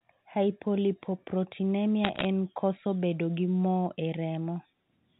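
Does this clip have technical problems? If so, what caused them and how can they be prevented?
Yes. Between 2.04 and 2.25 s, just before "en koso bedo gi", there is a burst of sharp ticks and crackle from bit errors on a digital phone line, with roughly half a percent of bits flipped. In the 8-bit logarithmic coding, each flipped bit corrupts one sample. A hit on the sign or a high-order bit throws that sample far from its true value. On a waveform these errors show as isolated single-sample spikes. On a spectrogram they appear as thin vertical broadband streaks against the speech, which is limited to below 4 kHz. Error detection or correction on the link would prevent these errors.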